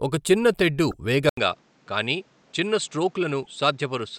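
Damaged data in a compressed stream at 0.88 to 0.94 s, just after "ఒక చిన్న తెడ్డు": corrupted frames make the decoder lose sync and hunt for the next header, producing a brief glitch.

Input switched to a poorer device at 1.29 s, likely a change to another microphone: after about 80 ms of silence the sound turns duller and about 5 dB quieter, with nothing above 8.5 kHz and a new noise floor roughly 35 dB down.

Damaged data in a compressed stream again at 3.40 to 3.47 s: the same loss of frame sync gives another short glitch.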